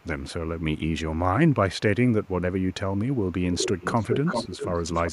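Echo leak: faint copies of the speech trailing about 460 ms at 0–0.05, 2.25–2.29 and 3.17–3.31 s, then a strong copy about 390 ms late at 3.52–4.75 s and a weaker one at 4.93–5.12 s, likely residual loudspeaker pickup passing the echo canceller.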